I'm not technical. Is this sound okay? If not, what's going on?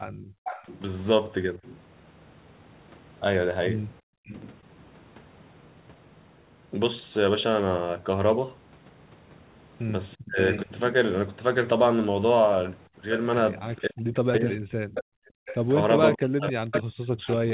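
No. Three kinds of problem come from the echo canceller, the part of a call that stops the other side's loudspeaker sound from being sent back.

Background gated by the echo canceller: from 0.11 to 0.45 s, 4.01 to 4.26 s and 14.86 to 15.45 s, the quiet room sound behind the voice suddenly drops almost to silence, then returns. Unlike the double-talk problem, the voice isn't hit. Only the background vanishes, for a fraction of a second each time.

Echo leak: from 0.45 to 4.52 s, a faint copy of the voice trails about 0.42 s behind, likely loudspeaker sound the canceller failed to remove. From 10.52 s to the end it returns, more noticeable, about 0.59 s behind. Unlike the dropouts, this adds sound: a repeat, not a gap.

Speech suppressed in double talk: from 10.16 to 10.7 s, and again from 13.78 s to the end, the main voice dips sharply or breaks into pieces. This likely happens because both sides are talking at once and the canceller turns everything down. 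Here it's the voice itself that fades, not just the background.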